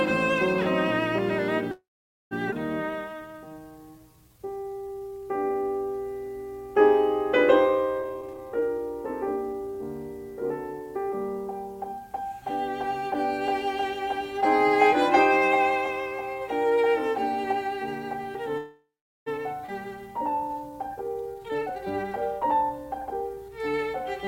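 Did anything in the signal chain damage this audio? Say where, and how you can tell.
Yes, at the network and jitter-buffer stage of a call path.

Call audio freeze: packets were likely held up in transit and the jitter buffer ran dry. From 1.71 to 2.33 s and 18.57 to 19.28 s the music trails off into a fading fill, with about 0.49 s and 0.4 s of silence, then resumes where it stopped with nothing lost.

Skip ahead: a stretch of audio was dropped, in transit or by the jitter buffer on overflow, while later audio was already waiting. At 2.51 to 2.54 s roughly 0.4 s of music vanishes, and at 19.66 to 19.70 s about 0.3 s. Each jump is spliced almost seamlessly, so the music leaps forward abruptly.

Jitter buffer slow-down: running low, the receiver repeated single pitch periods to rebuild its reserve. From 2.86 to 5.68 s the music plays at 85% speed, stretched by 434 ms, and from 19.83 to 21.33 s at 87%, stretched by 205 ms. 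Pitch holds steady while the tempo drags.

Jitter buffer speed-up: holding more audio than its target, the receiver cut short pitch-period pieces to shed delay. From 7.99 to 11.18 s the music runs at 118% speed, and from 21.34 to 23.37 s at 129%, each dropping roughly 0.7 s. The tempo rushes while pitch stays unchanged.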